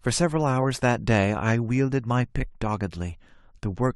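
Listening through the speech recording, nothing stood out as a technical problem.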